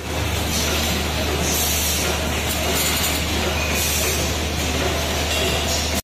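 No technical faults are audible.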